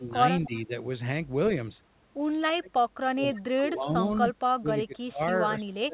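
The speech dips from 0.00 to 0.19 s, by about 15 dB. This is speech suppressed in double talk, likely an echo canceller turning the near talker down while the far side also spoke. The same ducking returns from 0.45 to 0.73 s (about 10 dB), 2.44 to 3.38 s (deepest, about 35 dB, nearly cutting out), 3.55 to 4.33 s (about 15 dB) and from 4.57 s to the end (about 25 dB).

A faint copy of the voice trails 259 ms behind at 0.44 to 0.60 s, about 20 dB down, and briefly at 3.35 to 3.40 s, about 25 dB down. This echo leak is likely loudspeaker pickup that the far end's canceller failed to remove, sent back down the line.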